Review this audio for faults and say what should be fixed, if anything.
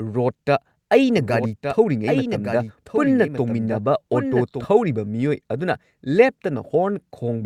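A doubled audio track runs from 1.16 to 4.64 s: a second copy about one second late and about 5 dB quieter, likely a slower duplicate capture path. Unlike echo, it has no decay and starts and stops abruptly. Prevent it by routing the source through a single capture path.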